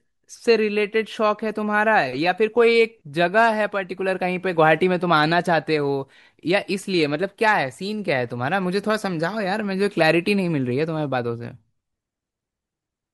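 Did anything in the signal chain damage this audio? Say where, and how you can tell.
No, nothing in the chain from capture to playback has audibly damaged this speech recording, and the signal holds together with continuous level, intact timing and unbroken bandwidth throughout.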